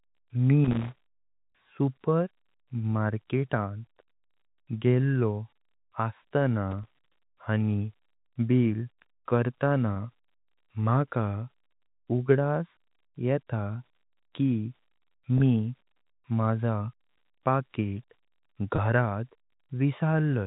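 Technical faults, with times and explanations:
1.50–1.52 s, 15.38–15.40 s and 18.76–18.78 s: packet loss with pitch repetition. Each gap is 20 ms, which fits a single dropped packet. The receiver covers it by replaying the last pitch period, so the phone-band speech briefly holds on a slightly buzzy tone.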